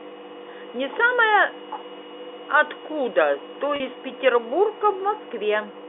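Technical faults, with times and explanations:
3.76 to 3.80 s, packet loss with pitch repetition: 40 ms went missing, which fits two 20 ms packets. The receiver bridged the gap by repeating the last pitch period, so the sound briefly holds with a buzz. Waveform: identical repeated cycles. Spectrogram: frozen, flat harmonics.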